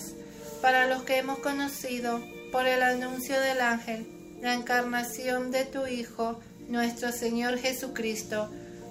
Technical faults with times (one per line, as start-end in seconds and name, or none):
none